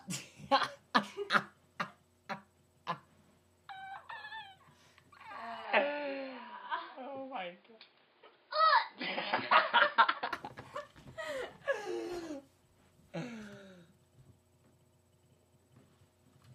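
From 5.65 to 10.33 s the sound turns dull, with nothing above 5 kHz and a faint new noise floor, likely an input switched to a poorer device.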